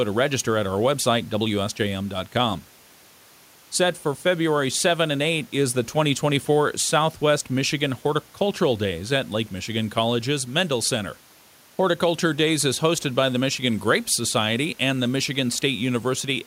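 Nothing's gone wrong anywhere in this speech recording, and the only thing underneath it is the quiet background of the room itself, sitting about 32 dB below the talking.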